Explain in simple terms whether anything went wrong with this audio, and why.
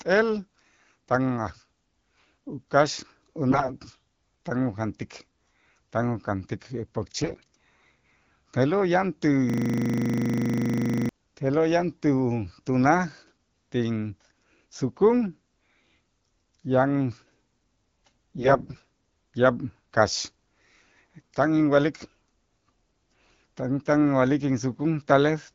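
Three short bursts of AMR bit errors occur: 3.5 to 3.74 s, 7.21 to 7.55 s just after "tan ujantik", and 18.36 to 18.84 s. A weak phone link flipped some less-protected data. The voice keeps its pitch and loudness but briefly turns hoarse, scratchy and gargly.

A system hang loop runs from 9.50 to 11.09 s, right after "te'lo' yan ti". The computer froze while the sound hardware kept replaying the same 40 ms slice, 25 times a second. That makes a steady buzz until the speech returns with "te'lo' yan".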